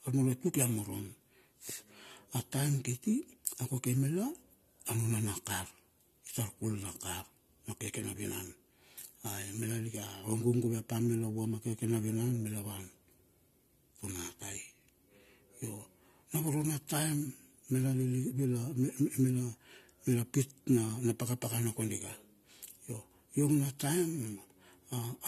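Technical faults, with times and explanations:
Throughout, generation loss: the speech sounds swirly, hollow and smeared, with blurred consonant attacks and nothing above 14.1 kHz. This is likely repeated AAC-LC encoding, around three passes at about 64 kbit/s. It is more degraded than one encode at that rate would be, because each pass requantises on a shifted frame grid.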